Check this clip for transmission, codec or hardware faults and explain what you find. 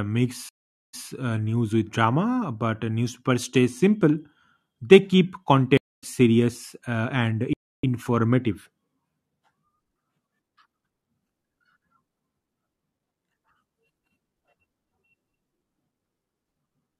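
The speech has two stream reconnects and one playback stall.

Stream reconnect, 0.49 to 1.08 s and 5.77 to 6.04 s: the connection dropped and a fresh decoder restarted mid-stream. The first leaves about 442 ms of silence, then replays 149 ms before "uh news with drama". The second is silent for about 251 ms and resumes roughly 150 ms later, at "serious uh and".

Playback stall, 7.53 to 7.84 s: likely the player ran short of data or its thread was blocked, so output stopped. Just after "serious uh and" the speech cuts out for 300 ms, then carries on.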